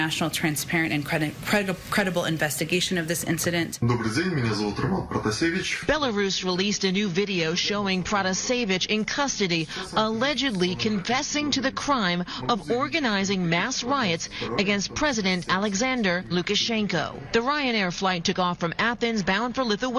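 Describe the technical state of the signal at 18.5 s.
At 18.5 s the signal is intact, with no dropout, distortion, glitch or other audible fault at that moment.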